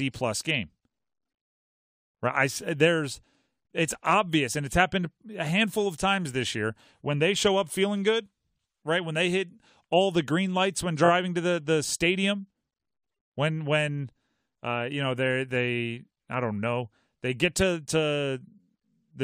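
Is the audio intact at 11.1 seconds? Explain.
No. Just before that point, from 11.04 to 11.09 s, there are repeated frames: one compressed block of about 23.2 ms, a size that points to a single codec frame, is decoded and played two extra times, so the same sliver of sound sounds three times in a row as a brief stutter. Unlike a dropout, nothing is lost. The passage is duplicated, and the clip runs 46.4 ms longer than it should.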